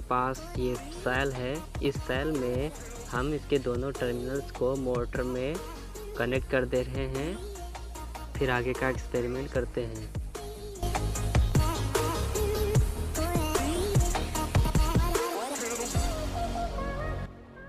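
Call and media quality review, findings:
Filter restarted on every block, 10.36 s to end: tick-buzz at 21.5 Hz that tracks level. Filter state resets per block, which fits a 2048-sample block size.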